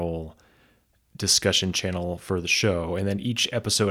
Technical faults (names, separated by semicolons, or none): none